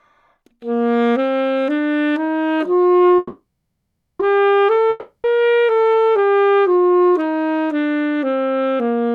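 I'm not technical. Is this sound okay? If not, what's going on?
No. From 3.17 to 4.21 s there is a call audio freeze, likely from data arriving late so the playback ran dry. The last sound is stretched into a fading buzz and then nearly half a second of silence, after which it resumes with nothing lost, just a bit later.

From 4.90 to 5.26 s a long network dropout occurs: likely a stretch of data never arrived. About a third of a second is replaced by a fading buzz, and the sound picks up further along, with that part missing.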